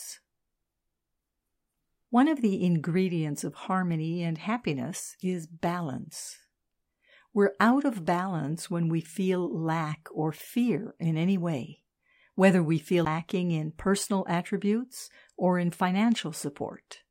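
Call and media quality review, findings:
CD skip at 13.05 s, between "way whether we feel" and "in personal attributes or". A mute of roughly 15 ms is heard as a tick, then the audio jumps to another spot. Disc transport: shock or surface flaw knocked the laser onto another spiral turn.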